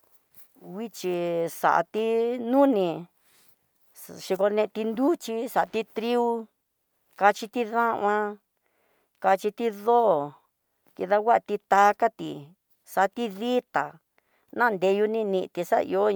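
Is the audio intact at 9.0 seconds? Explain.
Yes, the speech runs cleanly through 9.0 seconds with no dropout, glitch or other fault at that moment.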